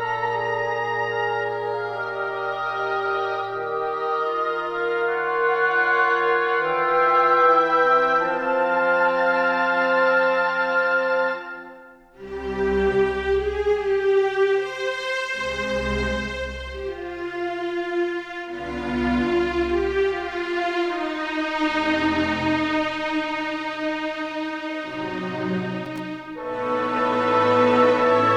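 From 25.85 to 25.99 s, loose connector crackle: a worn contact intermittently breaks the signal path, chopping the sound into a brief, irregular burst of scratchy crackle.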